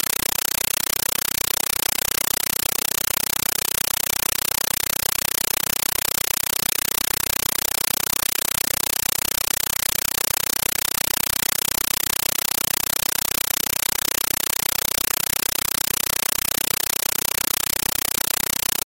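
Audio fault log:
throughout, compressed stream played as audio: undecoded AC-3 frames become loud static bursts, 8 ms each, 31.25 times a second, a rhythmic chatter unlike continuous hiss.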